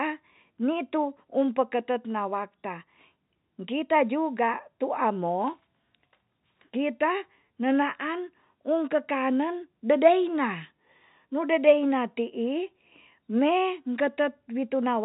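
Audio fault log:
No faults are heard in this speech clip. The G.711 telephone coding path is working as expected, with the sound limited to below 4 kHz and only a faint noise under the speech that rises and falls with its level.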